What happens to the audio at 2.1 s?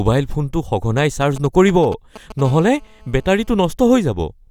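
GSM signalling bursts run from 0.98 s to 2.41 s, so 2.1 s falls inside them. A nearby 2G phone is exchanging short groups of signalling pulses with its network, and the audio circuitry rectifies that radio energy into the signal path. The result is a galloping dit-dit-dit of brief buzzes pulsing at 217 Hz, sitting roughly 15 dB below the speech.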